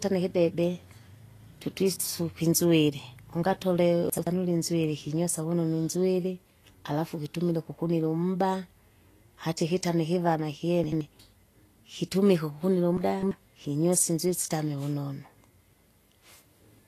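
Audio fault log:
Throughout: Vorbis compression, likely. Nothing survives above 14.2 kHz, and the treble left below that has turned hissy and grainy, with softened consonant attacks. The damage is plainly audible and fits a low bitrate, somewhere around 35 kbps.
4.10–4.27 s, 10.84–11.01 s, 12.97–13.31 s: chunks out of order. Blocks of roughly 85 ms of speech play late, after audio that should have followed them. The first two sound like a single chunk displaced. The third is longer and sounds like several. Each one gives a brief jumbled moment.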